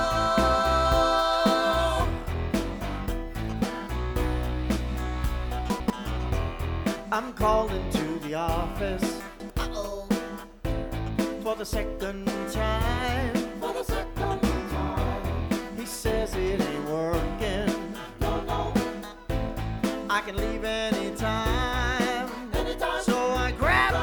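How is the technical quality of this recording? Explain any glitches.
Two glitches are audible, both chunks out of order. At 5.7 to 5.9 s and again at 9.2 to 9.5 s, a short block of audio plays after material that should follow it. The block size sounds like about 100 ms, landing one slot late the first time and two slots late the second. Nothing is missing, but each reorder leaves three hard joins, so each event sounds like a brief jumbled stutter.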